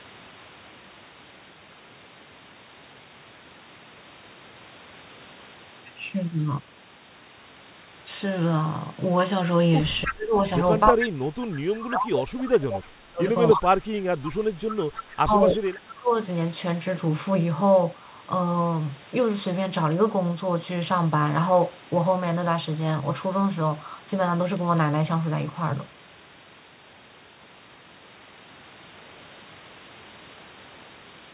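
At 10.05–10.35 s the sound dips by up to about 25 dB, likely speech suppressed in double talk. The echo canceller ducks the talker in pieces rather than muting cleanly, as a dropout would. At 10.06–10.13 s a copy of the voice returns 301 ms late at about 5 dB below it, likely an echo leak. Its fixed, discrete delay sets it apart from reverb. The suppression returns across 10.89–14.55 s, about 3 s of broken, thinned sound, with further echo at 10.84–11.06, 12.45–12.49 (fainter, about 20 dB down), 13.5–13.58 and 14.68–15.67 s (about 10 dB down). A last suppressed stretch runs from 15.13 to 16.14 s. Throughout, the G.711 call path leaves nothing above 4 kHz.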